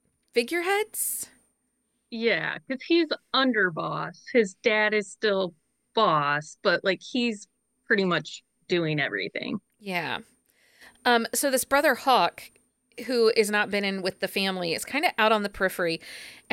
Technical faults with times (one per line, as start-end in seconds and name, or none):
none